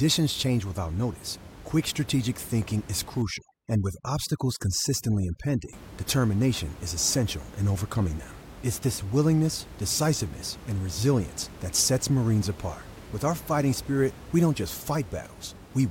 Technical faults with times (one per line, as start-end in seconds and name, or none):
3.22-5.73 overdone noise removal